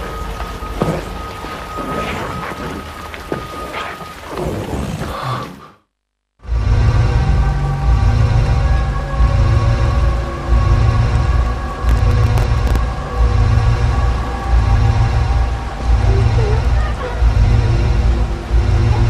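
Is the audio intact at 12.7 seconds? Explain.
No. At 12.7 seconds the audio is inside a burst of processor overload crackle running from 11.87 to 12.76 s. The processor keeps missing the deadlines for its tiny buffers, a millisecond or two each, and around twenty times across the span a slot is filled with stale, already-played audio with hard edges. It sounds like gritty tearing over the sound. The waveform shows jagged discontinuities, and a spectrogram shows scattered vertical broadband streaks across the span.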